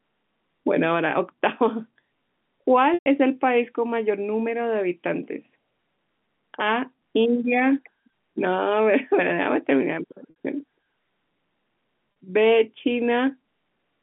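At 2.94, 10.30 and 12.12 s, packet loss with pitch repetition fills gaps of 120, 60 and 40 ms by looping the last pitch period. The shorter two sound like a briefly held, buzzy note. The 120 ms gap fades toward silence before speech cross-fades back.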